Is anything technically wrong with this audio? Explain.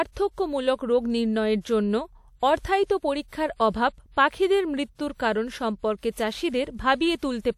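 Yes, there's pre-echo in this speech, at 3.28 to 3.32 s, 3.70 to 3.74 s and 5.99 to 6.03 s. The codec spread its coding noise across each block, so a short hiss of 35 to 45 ms arrives before each sharp attack, softening and smearing its onset.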